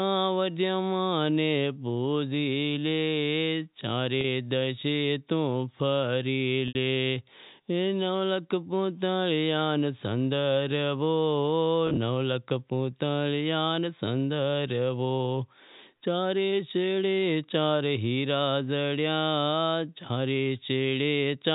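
Speech carried over a telephone-band G.711 path, with packet loss with pitch repetition at 4.21–4.24 s, 6.68–6.75 s and 11.87–11.97 s. The receiver loops the last pitch cycle, giving a brief held buzz at the shorter gaps rather than the clean dropout or click of plain muting, while the longer gap at 6.68 s fades into silence before the speech returns with a short cross-fade.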